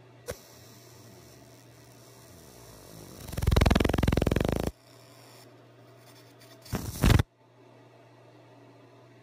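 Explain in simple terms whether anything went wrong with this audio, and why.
The converter's timing wobbled by a few millionths of a second throughout, so samples landed slightly off. That sample clock jitter adds a hiss that grows on loud, bright moments.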